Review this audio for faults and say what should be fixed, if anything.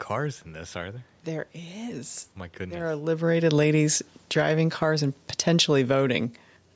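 From 2.71 to 4.55 s, automatic gain falling: the control judges the input too loud and lowers gain by about 7 dB, sinking speech and room noise together before "cars and". Reduce the input level or slow the AGC's attack so loud passages do not trigger gradual gain reduction.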